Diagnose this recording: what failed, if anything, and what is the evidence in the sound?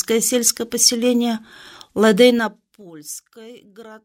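Zipper noise from 2.22 to 2.90 s: an unsmoothed gain stage drops the level about 25 dB in 3 dB steps, roughly ten per second, each step clicking.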